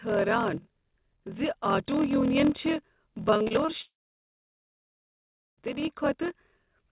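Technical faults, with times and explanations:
Throughout, block size mismatch (padded): each block is padded with a short stretch of zeros, which fits 1024-sample blocks read into a larger one. The regular gaps create a 41.7 Hz buzz, and the sound runs slower at 0.889 times speed while keeping about its normal pitch.
3.30–3.70 s, repeated packet loss (robotic sound): about five holes, none longer than 39 ms, are patched by extending the preceding sound. About 120 ms is missing, roughly a third of this span, so the sound turns choppy.
3.82–5.59 s, long network dropout: about 1.76 s of audio is missing, likely from a network dropout. The last sound is stretched briefly before fading, and about 1.66 s of silence follows. The audio then resumes later without the lost part, still limited to 4 kHz by the call codec.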